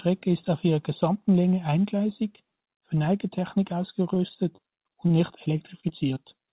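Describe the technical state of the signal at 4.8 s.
At 4.8 s the speech sits inside a stretch of repeated packet loss (robotic sound) running from 4.14 to 6.18 s. Eleven short holes, none longer than 26 ms, are each patched by stretching the preceding sound. Unlike a single dropout, this gives a choppy texture with pieces missing throughout the stretch, heard within the band-limited call sound that stops at 4 kHz.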